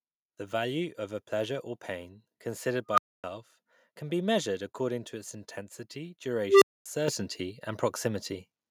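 At 7.08 s the microphone volume is stepped up: the call software judged the input too quiet and raised the device's capture level in a single jump of about 8 dB. The speech and the background noise both get louder at once. That shared, instantaneous rise is what separates it from a talker leaning closer to the microphone, which would lift the voice but not the room, and from a gradual automatic gain ramp.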